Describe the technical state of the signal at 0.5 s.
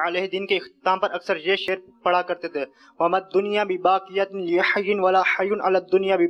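At 0.5 s the signal is intact, with no audible fault at that moment.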